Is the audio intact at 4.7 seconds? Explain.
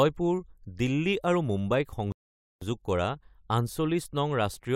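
Yes, the speech at 4.7 seconds plays through cleanly, with no dropout, click, distortion or other fault audible at that moment.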